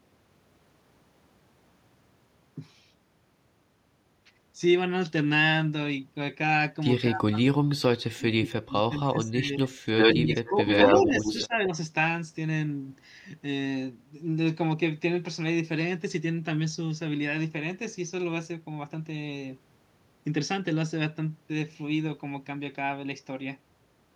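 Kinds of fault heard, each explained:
Speech suppressed in double talk: The speech is pushed down while another signal is present, most likely an echo canceller cutting back during double talk because it cannot tell the near talker from loudspeaker echo. The longest stretch runs from 7.07 to 9.87 s. About two seconds of speech is affected there, dropping by roughly 35 dB at its deepest. Shorter dips of about 10 to 15 dB follow between 10.14 and 11.72 s.
Echo leak: A delayed copy of the speech comes back, likely because an echo canceller on a loudspeaker device let part of the pickup through. The copy trails the speech by 82 ms. It first appears at 9.97 s and returns from 10.3 to 11.47 s. In those stretches it is roughly as loud as the speech itself, or slightly louder. At 11.64 s a brief, much fainter scrap of it can be heard.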